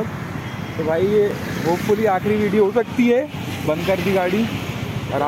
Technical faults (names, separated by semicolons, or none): block of digital silence